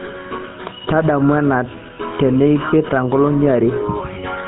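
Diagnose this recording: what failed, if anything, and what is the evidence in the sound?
The codec stage is the culprit here. The whole speech clip has that buzzy, gravelly texture of the GSM full-rate codec, and it's plainly audible from start to finish. Nothing survives above 4 kHz, so the top end feels clipped off. The coder rebuilds the voice from a vocal-tract model fed with sparse, evenly spaced pulses, which fits the old 13 kbps full-rate scheme, and that coarse excitation is where the rasp comes from.

Then there's a network hiccup near the end, a lost GSM frame between 4.14 and 4.17 s. You get a short, rough, metallic ring where the decoder had no fresh data and simply reused the last good frame's parameters. The gap is brief enough that it points to a single 20 ms frame going missing, so you hear the ring rather than a fade into silence.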